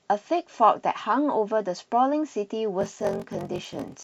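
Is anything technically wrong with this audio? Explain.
Yes. From 2.79 s to the end, the speech shows a block size mismatch (padded). Each block arrives short and is zero-filled, so a gap repeats at 46.9 Hz, heard as a buzz, which fits 1024-sample reads. Playback slows to 0.861× at roughly unchanged timbre.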